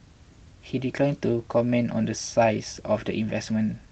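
The speech carries no audible technical faults, only the ordinary character of a call path, with the high end rolled off at about 8 kHz in the way an Opus-coded call leaves it.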